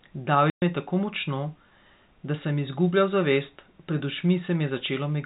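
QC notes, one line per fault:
0.50 to 0.62 s, packet loss filled with silence: a 120 ms hole with hard edges, right before "me je tako močno". A run of lost packets was replaced by plain silence, and the length fits six 20 ms packets. The telephone-band G.711 sound around it carries on as expected.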